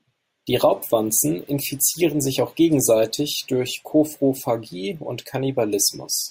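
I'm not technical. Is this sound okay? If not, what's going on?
Yes, the recording is in good technical shape, with no dropouts, glitches or other playback problems anywhere in it.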